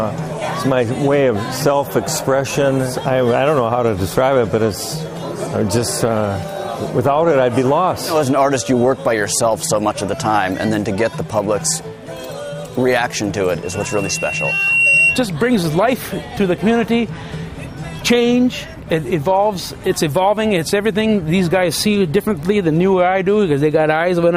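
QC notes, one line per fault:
13.63–15.27 s, loudspeaker feedback squeal: a steady 2.7 kHz tone swells over about a second and a half until it stands roughly 5 dB above the programme, then stops. The microphone is hearing its own loudspeaker, and at that frequency the loop gain exceeds one.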